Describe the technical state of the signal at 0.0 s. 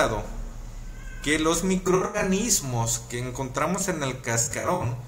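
The signal at 0.0 s is intact, with no technical fault present at that moment.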